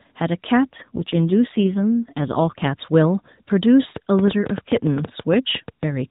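From 0.84 to 2.68 s the speech passes through an AMR rate drop, with the codec stepping down from 12.2 to 5.9 kbps before returning. The band still ends at 4 kHz, as it does throughout this AMR-NB call, and nothing goes silent, but the voice turns buzzier and more synthetic. On a spectrogram the harmonic striations blur and the formant structure smears into coarser blocks. The waveform stays continuous, with no gap or level step at either boundary.

From 3.96 to 5.84 s a train of clicks rides over the audio, about 15 sharp pops arriving unevenly at roughly 8.6 per second. They are similar in shape and jump roughly 15 dB above the surrounding signal, so they tick clearly even through pauses. The waveform shows them as narrow isolated spikes, and the spectrogram as thin vertical lines reaching across the whole band. The likely source is electrical interference or a faltering interface injecting pulses.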